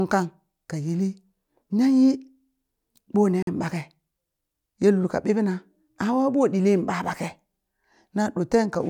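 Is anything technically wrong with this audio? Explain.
Yes. From 3.43 to 3.47 s there is a Bluetooth stall. Interference likely held back wireless packets until the headphones' buffer ran empty, so playback paused while it waited for resent data. The speech cuts to 47 ms of silence, then carries on.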